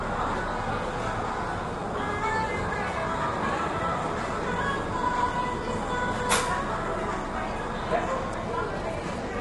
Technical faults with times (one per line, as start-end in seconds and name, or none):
0.00-9.41 low-delay AAC compression